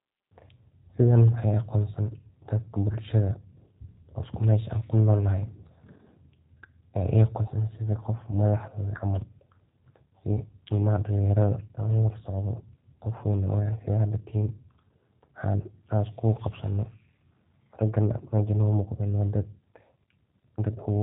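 Throughout the speech, the audio has passed through a G.729 codec, a low-rate VoIP coder that does not store the waveform itself. It models each short frame with a vocal tract filter, a pitch predictor and a few pulses. Nothing above 4 kHz survives, so the speech sounds narrowband and boxy. The damage is plainly audible as a rough, slightly synthetic buzz on the voice, which fits an 8 kbit/s rate.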